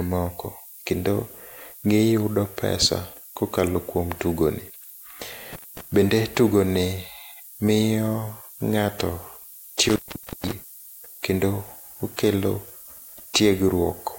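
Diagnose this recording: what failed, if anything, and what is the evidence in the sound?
A thin, steady hiss sits close under the speech for the whole clip and climbs sharply toward the top of the band. This is low bit depth with noise shaping from sample-format conversion: the audio was reduced to about 7 bits, and the rounding error was pushed upward in frequency.

The speech cuts out twice, with crackle at each edge, from 5.53 to 5.81 s (a gap of about 218 ms) and from 9.86 to 10.53 s (about 479 ms). This is an intermittent contact in the analogue wiring, where a loose plug or cable briefly broke the signal path.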